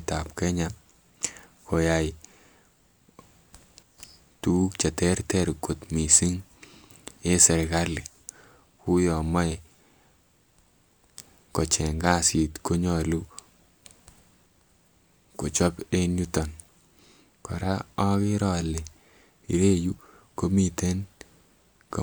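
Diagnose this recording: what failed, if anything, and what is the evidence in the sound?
Nothing failed: no stage of the signal chain leaves an audible fault anywhere in this speech.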